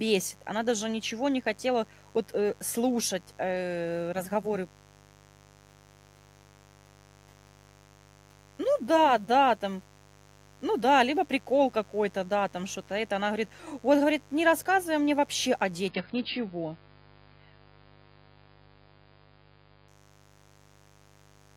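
Interference from switching spikes on a 50 Hz mains supply leaks into this speech recording throughout, adding a steady, raspy buzz, roughly 30 dB below the speech, whose harmonics stack up from 50 Hz well into the kilohertz range. From 15.88 to 19.88 s, just after "рассказывай мне вообще о", the adaptive stream switched to a lower bitrate. Everything above 5.1 kHz disappears and codec artefacts thicken, which fits a drop from around 96 to 16 kbit/s AAC. Quality then returns abruptly without any gap.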